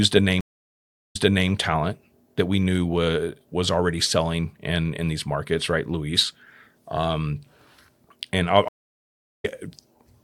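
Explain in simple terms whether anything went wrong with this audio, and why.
Two stream reconnects. From 0.41 to 1.50 s the speech goes silent for about 0.73 s, then restarts 0.37 s earlier, just before "talent that we knew". After "and I'll", from 8.68 to 9.45 s, it drops out for 0.74 s and comes back about a fifth of a second later. Each time the connection broke and the player restarted partway through the stream.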